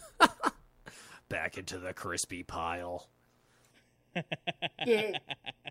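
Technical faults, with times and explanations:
3.71 to 5.70 s, channel delay (comb filtering): the speech turns hollow and phasey because one channel lags by roughly 0.4 ms, cutting evenly spaced notches from about 1.5 kHz.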